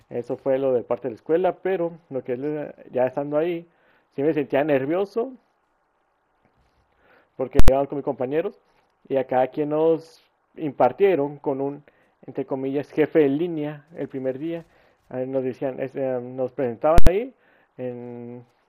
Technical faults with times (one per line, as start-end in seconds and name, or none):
7.59-7.68 invalid numbers at full scale
16.98-17.07 invalid numbers at full scale